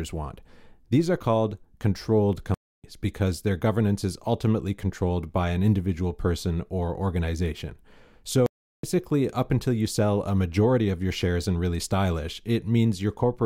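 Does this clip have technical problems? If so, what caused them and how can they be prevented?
Yes. The player likely ran out of buffered data or had its thread blocked, causing two playback stalls: the speech cuts to silence from 2.54 to 2.84 s and from 8.46 to 8.83 s, about 0.30 and 0.37 s. A larger buffer and high-priority audio thread prevent this.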